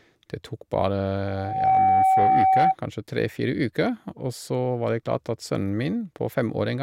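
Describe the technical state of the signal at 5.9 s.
At 5.9 s the speech signal is intact, with no audible technical fault at that moment.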